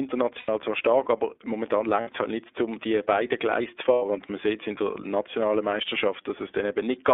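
Throughout, the speech has passed through the iLBC codec. The band is held to roughly 300 Hz to 3.6 kHz, and each 30 ms frame's excitation is coded on its own, which fits the 13.33 kbps mode. The result is a plainly audible rough, synthetic edge, not the muffling of a simple low-pass.

At 0.38 to 0.49 s, just before "zwar stark aber", lost iLBC frames leave a gap of about 90 ms. Later gaps come at 2.01 to 2.08 s, before "es halt", lasting about 60 ms, and at 3.93 to 4.02 s, about 90 ms. In each, the decoder repeats the last pitch cycle mixed with noise, so you hear a held, buzzy or breathy vowel rather than silence. Because the frames stand alone, the voice is right again almost at once afterwards.

At 1.66 s, just after "zwar stark aber", a bit error spike in a single sample gives one sharp, broadband tick. It is unrelated to the speech, and unlike the frame losses it has no duration or tone.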